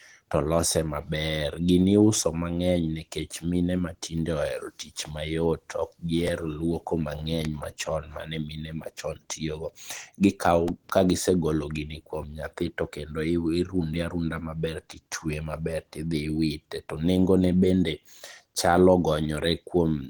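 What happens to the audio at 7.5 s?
A sudden voltage pulse, likely from a switch, plug or static discharge, enters the signal from 7.45 to 7.47 s as one loud pop, about 15 dB above the speech, which carries on underneath it. Throughout, including this moment, the speech sounds hoarse and grainy in the way of likely Opus compression at a low bitrate, perhaps around 16 kbps, in its hybrid speech mode.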